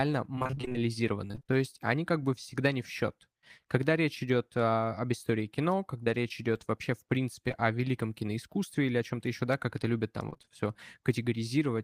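Right from the start, 0.35 to 0.80 s, there's repeated packet loss giving that robotic sound: eleven short holes, none longer than about 23 ms, with nearly half the stretch patched by the receiver stretching out the last bit of speech. So it comes out choppy with pieces missing. Same thing again from 1.27 to 1.58 s, six gaps, just before "они как бы всегда". A last burst runs 10.30 to 10.50 s, five gaps, right after "как это любят там".

In between there's short concealed packet loss. At 6.04 to 6.08 s about 20 ms of speech never made it, and the decoder filled the hole by continuing the previous sound and then blending back into the real signal, so you get a quick smear. Two more back to back, 7.48 to 7.52 s and 7.52 to 7.56 s, land just before "великом киноискусстве или о" and give a brief wobble there.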